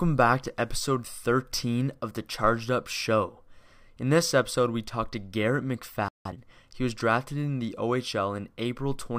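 At 6.08 s the speech cuts to silence for about 170 ms until 6.25 s, a playback stall, likely the player running short of buffered data. From 6.25 to 6.41 s a time-compressed catch-up follows: small pieces are cut and cross-faded at 2.0x speed, sounding hurried at normal pitch.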